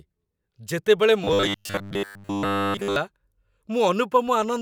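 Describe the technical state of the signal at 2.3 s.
At 2.3 s the speech sits inside robotic sound from repeated short buffers, 1.24 to 2.96 s. A 10 ms slice is likely looped while most real audio is skipped, forcing a metallic 100 Hz buzz. The waveform shows identical repeating cycles, and the spectrogram shows rigid harmonics spaced 100 Hz apart.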